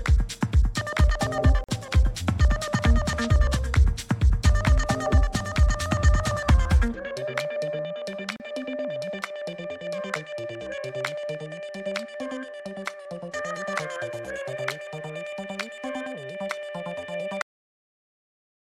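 At 1.64 s there's a short hole, about 45 ms, running to 1.69 s, and another at 8.36 s lasting about 35 ms, out to 8.40 s. Both are the classic gap at a join of encoded pieces. Each piece went through the encoder on its own, so the encoder's start-up delay and the padding on its final frame got left in when they were stitched together. You hear a brief dropout with smeared edges, then the sound picks up right where it left off.

Then at 17.42 s you get a cut-off end. The audio just stops mid-sound and falls straight to digital silence, with no decay at all, and it stays dead through the remaining second or so. The final buffers evidently never got written out or played, so whatever was sounding at that moment is chopped off rather than allowed to ring down.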